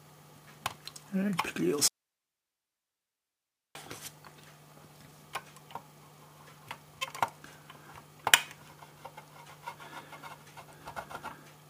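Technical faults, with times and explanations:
1.88–3.75 s, audio dropout to a faint residue: the signal feed likely broke while the path after it stayed live. For about 1.9 s the sound cuts out abruptly and only hiss remains, roughly 55 dB below the normal level, before it returns just as suddenly.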